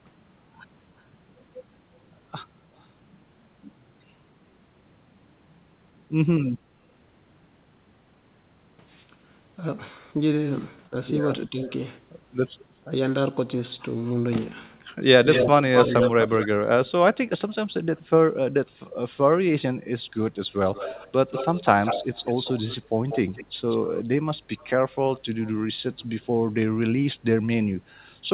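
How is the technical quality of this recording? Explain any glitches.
The recording has two recurring call glitches over narrowband audio with nothing above 4 kHz, which fits a G.711 phone codec.

Echo leak: a delayed copy of the speech appears at 2.79, 12.7 and 14.06 s as faint scraps about 30 to 40 dB down. From 15.31 to 16.47 s it is as loud as the speech, and from 20.65 to 25.52 s it is about 10 dB down. Delays run from 191 to 276 ms. The likely cause is a far-end speakerphone whose echo canceller let its loudspeaker pickup through.

Speech suppressed in double talk: the talker's level dips at 10.9 to 11.7 s and 12.84 to 13.01 s, by roughly 10 dB. From 15.13 to 16.98 s it drops by up to about 30 dB. These dips likely come from the echo canceller turning everything down while both sides spoke at once, which matches the loud echo overlapping that last stretch.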